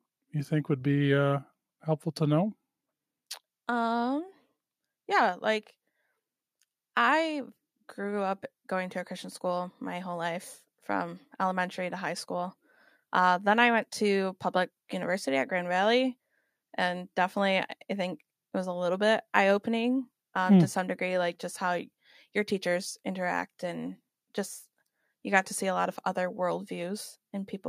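No technical faults can be heard anywhere in the speech recording, and the signal stays continuous and steady throughout.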